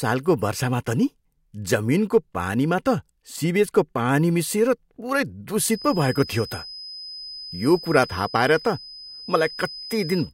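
A loudspeaker-to-microphone loop that is likely sitting right at the edge of feedback begins ringing at 5.65 s and carries on until the end of the clip at 10.33 s. The loop gain is just high enough to sustain one frequency without building into a howl, so it produces a feedback whistle: a thin, steady tone at 5 kHz sitting about 15 dB below the speech, swelling and fading slowly in level as it hangs behind everything that follows.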